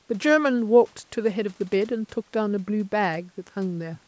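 No technical faults are audible.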